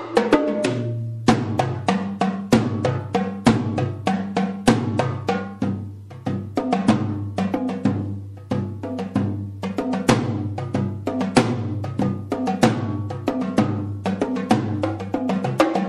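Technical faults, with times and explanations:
Throughout, MP3 compression: a starved encoder likely cut the treble and switched weak frequency lines on and off, leaving a swirly, watery sound consistent with about 64 kbps.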